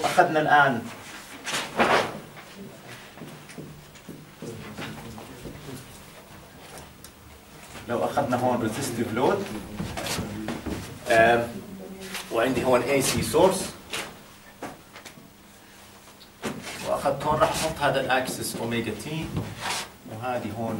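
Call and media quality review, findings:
No audible faults found.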